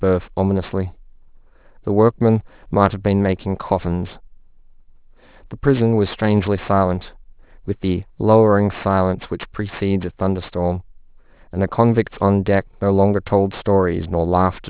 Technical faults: aliasing

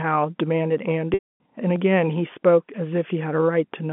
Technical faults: audio missing between chunks; packet loss with pitch repetition

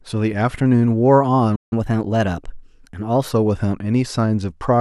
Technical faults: playback stall; catch-up at higher speed

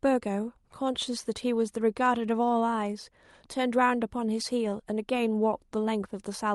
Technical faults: none

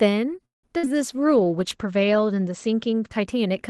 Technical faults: call audio freeze; burst of packet loss; short concealed packet loss; call bitrate drop

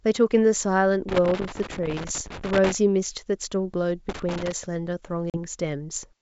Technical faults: loose connector crackle; packet loss on an ADPCM call

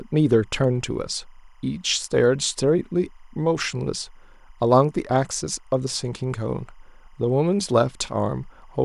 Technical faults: timecode bleed

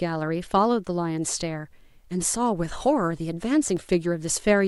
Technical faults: loose connector crackle

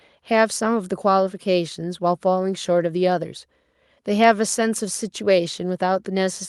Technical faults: none

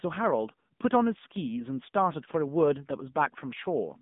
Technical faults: AMR narrowband mobile codec

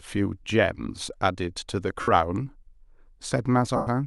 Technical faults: lost LE Audio frames

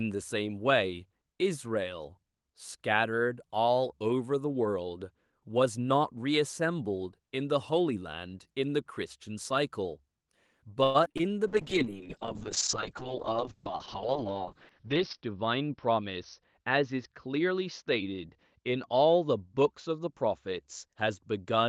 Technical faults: repeated packet loss (robotic sound); jitter buffer slow-down; call bitrate drop; jitter buffer speed-up

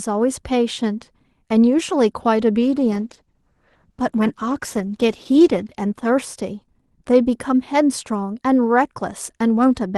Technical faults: call bitrate drop

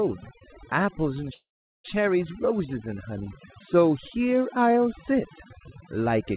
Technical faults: overdone noise removal; call audio freeze

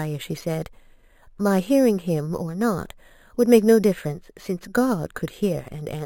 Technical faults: imaging from sample-and-hold upsampling

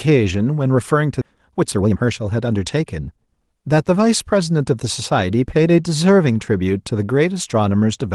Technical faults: skip ahead; jitter buffer speed-up

